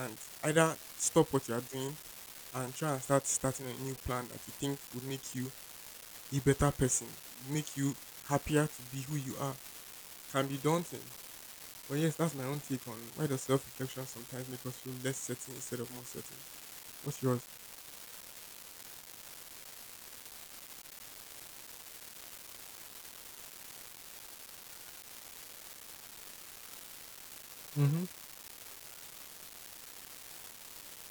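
An unreliable data bit runs through the whole of this speech recording, from start to finish. One line of the digital word is flipping at random, so a scattered share of samples lands wrong by the same fixed step, about -30 dBFS. Each error is an identical small spike, and together they form a steady crackling fizz that sits under the talking and carries on through the pauses too.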